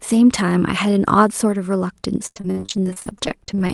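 From 2.26 s to the end, there's repeated packet loss (robotic sound): gaps up to 63 ms keep getting patched with stretched sound, leaving it choppy.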